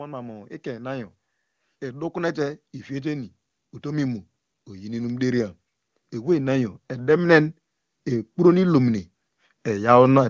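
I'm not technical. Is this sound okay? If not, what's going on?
No, not quite. There's automatic gain rising twice: from about 1.8 to 5.5 seconds, and again from about 6.1 to 9.0 seconds. The call's volume control decided the input was too quiet and slowly turned it up, so the speech and the background noise both swell louder together over a few seconds, rather than the person actually speaking louder. It's a moderate lift each time.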